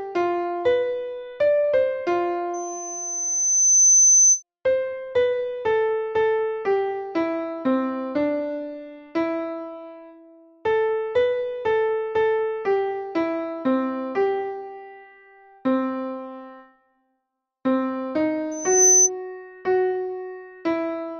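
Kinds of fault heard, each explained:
Loudspeaker feedback squeal: a microphone is picking up the loudspeaker it drives, and at about 6.1 kHz the loop gain exceeds unity, so that single frequency keeps reinforcing itself. It appears twice as a pure high tone. From 2.54 to 4.43 s it swells over roughly a second and a half to around 10 dB above the programme. From 18.51 to 19.10 s it climbs much faster before cutting off.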